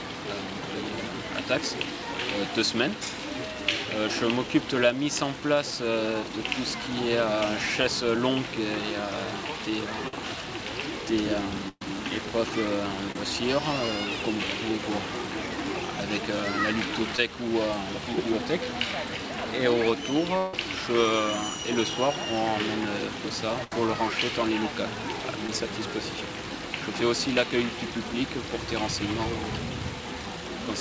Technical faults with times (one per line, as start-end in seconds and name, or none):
10.08-10.13 burst of packet loss
11.68-11.82 burst of packet loss
13.12-13.16 short concealed packet loss
17.17 short concealed packet loss
20.38-20.54 long network dropout
23.64-23.72 burst of packet loss
25.47 short concealed packet loss